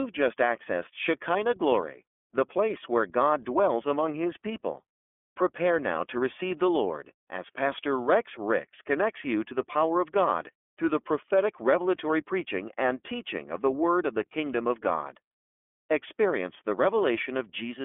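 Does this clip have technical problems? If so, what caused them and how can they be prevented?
Yes. The iLBC codec damages the speech throughout. Nothing above 3.6 kHz survives, so it sounds narrow and dull. Each frame is coded alone, adding a plainly audible rough, synthetic edge that fits the 13.33 kbps, 30 ms mode. Prevent this by using a wideband codec.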